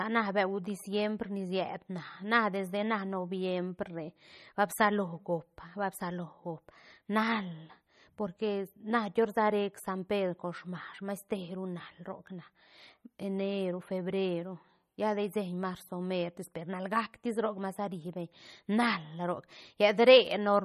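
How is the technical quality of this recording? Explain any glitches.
The quality is poor: compression damage is plainly audible for the whole recording. Throughout, the speech has a watery, swirling texture, s sounds chirp metallically, and nothing is heard above 13.8 kHz. This is likely MP3 compression at a low bitrate, around 32 kbps, where the encoder cuts the treble and lets weak frequency lines flicker on and off between frames.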